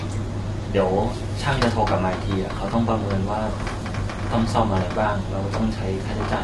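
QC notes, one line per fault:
Throughout, low-delay AAC compression: rough, grainy speech with noise between harmonics and nothing above 11.6 kHz, likely from short-frame AAC-ELD coding fitting about 32 kbps.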